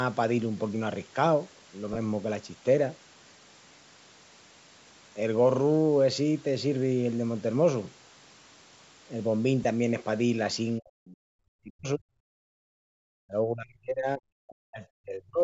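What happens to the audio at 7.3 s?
At 7.3 s the speech is intact, with no dropout, glitch or distortion, just the ordinary call microphone band reaching up to about 8 kHz.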